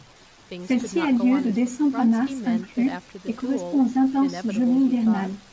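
No technical faults are present.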